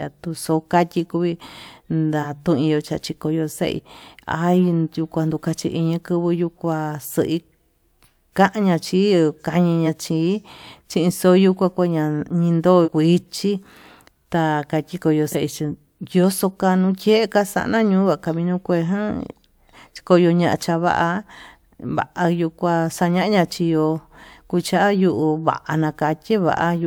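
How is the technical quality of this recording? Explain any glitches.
The speech is marred by compressed frames skipped, five times: at 2.22–2.24 s, 3.75–3.80 s, 9.86 s, 12.84–12.88 s and 15.32–15.35 s. Each time the audio leaps forward, losing about 40 ms (roughly one frame), or about 100 ms at 12.84 s, which fits a codec frame of about 43 ms. The decoder dropped missing or damaged frames, and the audio on either side is joined directly. Unlike a dropout, there is no silence gap.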